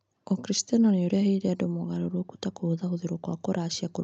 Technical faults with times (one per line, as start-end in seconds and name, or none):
none